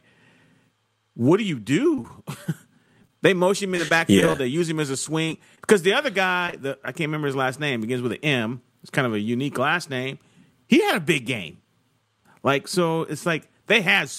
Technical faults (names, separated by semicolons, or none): repeated packet loss (robotic sound); short concealed packet loss